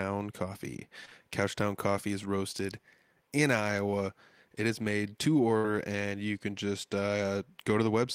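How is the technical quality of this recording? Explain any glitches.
The recording has network glitches in two places.

At 1.05 to 1.09 s and again at 1.09 to 1.13 s there is short concealed packet loss. About 20 ms of speech went missing each time. The receiver extended the preceding sound to cover it. This leaves a brief smear in the speech.

Near 5.57 to 5.66 s, between "is made to" and "and you can just", comes a burst of packet loss. About 60 ms never arrived. The decoder stretched the last sound and faded it, giving a held, dying tail before speech resumes further on.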